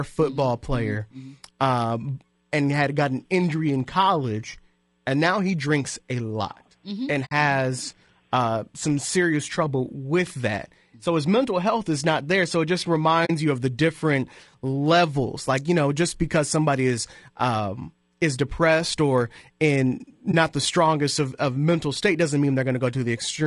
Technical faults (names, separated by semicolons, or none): low-delay AAC compression; AAC frame loss with muting